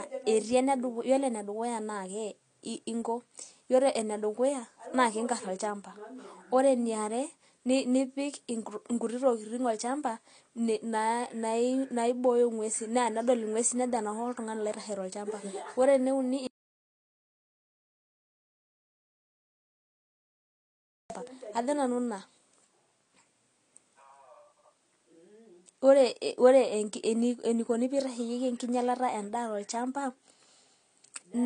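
Throughout the clip, the speech was likely squeezed through AAC compression at a low rate, which fits AAC-LC at around 32 kbps. The encoder discards everything above 9.8 kHz, so the speech sounds dull and closed-in, with plainly audible coding damage.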